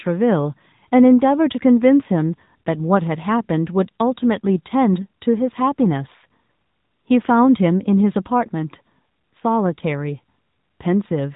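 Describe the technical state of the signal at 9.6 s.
At 9.6 s the speech carries the AMR narrowband mobile codec throughout: nothing above 3.8 kHz, and a buzzy, synthetic pulse-driven vocal-tract model consistent with roughly 10 kbps coding.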